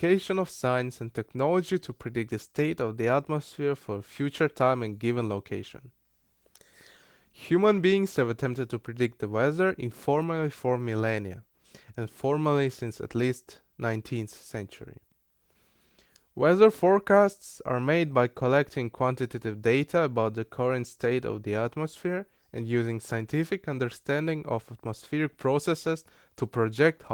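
Nothing stood out on listening to this speech, which comes through light Opus voice compression at about 20 kbps with its band reaching roughly 20 kHz.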